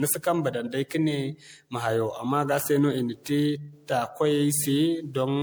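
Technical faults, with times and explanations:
Throughout, generation loss: the speech was likely re-encoded as MP3 around ten times, each pass requantising on a shifted frame grid. Errors pile up, so attacks blur and the sound turns swirly and hollow, worse than 128 kbit/s alone would explain, with nothing above 20.9 kHz.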